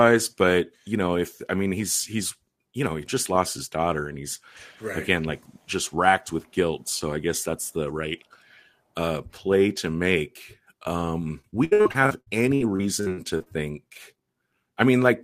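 From 11.41 to 13.48 s there is repeated packet loss, giving a robotic sound. Audio keeps dropping out. Each hole is patched by extending the preceding sound, the longest lasting 68 ms. Over a quarter of the stretch is patched, so the speech turns choppy.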